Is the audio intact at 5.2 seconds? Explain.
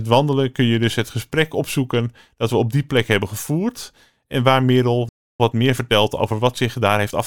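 No. At 5.2 seconds the speech drops into silence, a playback stall from 5.09 to 5.40 s, likely the player starving for data before resuming.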